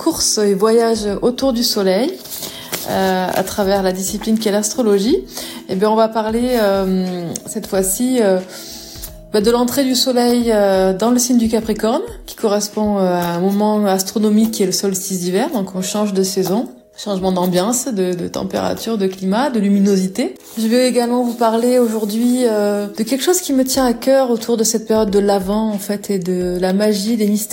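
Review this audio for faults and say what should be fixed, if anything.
Clock slip clicks run from 0.27 s to 26.5 s: single-sample ticks about every one and a half seconds, around twenty in all. They likely come from two unsynchronised clocks drifting about 15 ppm apart. Unlike random digital clicks, they arrive at a steady rate. Lock both devices to one shared word clock, or resample at the boundary.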